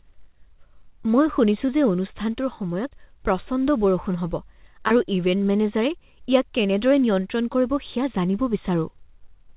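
Short concealed packet loss at 4.88 to 4.92 s: about 20 ms of this speech never reached the decoder in time, so the receiver stretched the preceding sound across 24 ms and blended back. It leaves a brief smear in the call audio, which stops at 4 kHz, as fits G.711.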